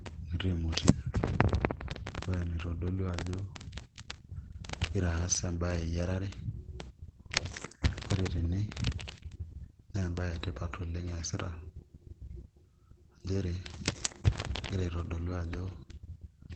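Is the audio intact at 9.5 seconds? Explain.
No, at 9.5 seconds the speech carries Opus compression damage, which runs through the whole clip rather than starting there. It sounds muffled and hoarse, and nothing is present above about 8.6 kHz. That narrow, heavily damaged band likely comes from Opus dropping into its SILK speech mode at wideband bandwidth. That happens when the encoder is starved of bits, and here it fits a rate of around 12 kbps.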